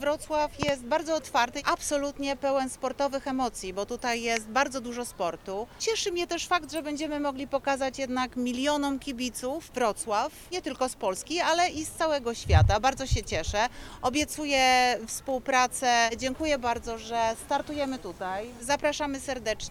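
At 0.63 s a loud pop breaks in. A second follows almost at once, and the pair is over by 0.71 s. They are sharp, hard thumps, peaking roughly 20 dB louder than the sound around them. The sound itself carries on underneath without a gap. The likely cause is a sudden voltage step or spike entering the signal path, perhaps from a connector, a switch or static. The circuitry after it then shaped that spike into these short bursts.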